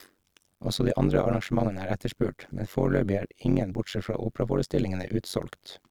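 Overlap-add ripple runs throughout the speech. The windowed frames were rejoined with an overlap that doesn't sum to constant gain, so the level dips by about 60 dB around 100 times a second. Unlike hum, it adds no steady tone; it chops the speech into a metallic buzz.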